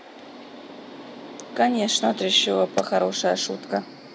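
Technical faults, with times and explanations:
No technical faults are audible anywhere in the speech recording.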